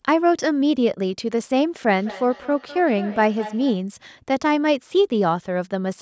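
A speech recording in which, from 1.87 to 3.85 s, each word comes back as a fainter copy about a fifth of a second later, peaking at about 15 dB below the speech. This is feedback echo between two devices: two devices in the same room are on one call, and one device's loudspeaker replays what the other's microphone sent. That microphone catches the sound again and returns it, and neither echo canceller removes it because each one only cancels its own device's playback. The call's microphone processing leaves nothing above 8 kHz.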